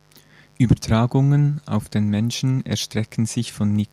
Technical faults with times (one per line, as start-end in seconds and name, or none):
0.00-3.92 mains buzz